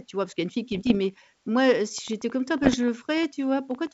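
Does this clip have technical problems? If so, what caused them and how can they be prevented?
Yes. There are bit errors on an ADPCM link, from 0.72 to 0.97 s, just after "y a une fille", and again from 2.63 to 2.77 s. Flipped bits knock the decoder's step size and predictor off track. Each error rings on briefly as pops and rough, level-jumping bursts. The second stretch is harsher and fits an error rate near one percent, against roughly half that in the first. The G.722 wideband coding itself sounds clean. Adding error protection or a stronger radio link would prevent this.

A train of clicks runs from 1.98 to 3.88 s. There are some fifteen clicks at about eight per second, unevenly spaced, each about as loud as the speech. They tick through words and pauses alike. The likely cause is interference from nearby equipment or a faulty connection or power supply. Shielding cables and moving away from noisy devices would prevent this.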